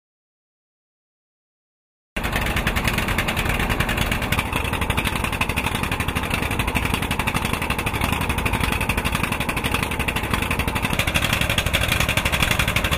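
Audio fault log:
0.0–2.17 s, audio dropout to silence: the clip opens in dead digital silence with no room tone, likely from a lost input while recording carried on writing zeros.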